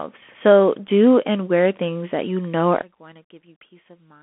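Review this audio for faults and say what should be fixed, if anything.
The whole clip carries Bluetooth CVSD headset codec damage. The speech sits in a narrow band of about 200 to 3400 Hz, with nothing above 3.8 kHz. The one-bit delta coder cannot keep pace with sharp rises, so sibilants turn gritty over a granular hiss. Its character fits a 64 kbps stream. Record through a wired or wideband microphone path rather than a headset link.

From 2.82 s to the end at 4.22 s, right after "things that you know", the speech drops by about 22 dB. This is likely one channel inverted, cancelling the shared centre content when summed to mono. Check channel polarity before any mono fold-down.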